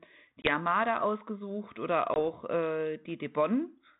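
Speech over a G.726 ADPCM link, band-limited below 4 kHz with light coding noise that fits the 32 kbit/s rate, shows packet loss on an ADPCM call twice: at 0.42 to 0.52 s and at 2.14 to 2.17 s, just after "ausgesucht oder". Each time a hard-edged gap of about one 20 ms packet drops to silence. The decoder's adaptive predictor and step size then no longer match the sender's, so the audio resumes with brief, slight distortion before resynchronising.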